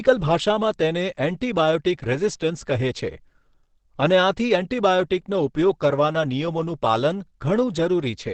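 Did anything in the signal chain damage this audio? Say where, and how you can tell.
Yes, at the codec stage: the speech carries heavy damage from what is likely Opus compression, present from start to finish. Nothing reaches above about 8.7 kHz, and the voice sounds muffled and hoarse rather than swirling, which fits Opus dropping into its SILK speech mode at a very low rate, around 12 kbps. At that rate the encoder models the voice coarsely and discards the top band. MP3 at a similar rate would instead leave warbling spectral holes.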